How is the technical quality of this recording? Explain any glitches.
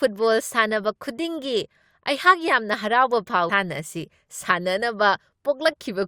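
One glitch stands out in this speech recording, at 3.49 s: a stream segment skipped. The speech jumps abruptly forward with a brief blip, as if a piece of the programme has gone missing. The likely cause is that one segment of the segmented stream failed to load and the player carried on with the next. On a waveform this appears as a sudden discontinuity with a tiny spike. A spectrogram shows a thin vertical broadband line where the harmonic patterns break off and resume mismatched.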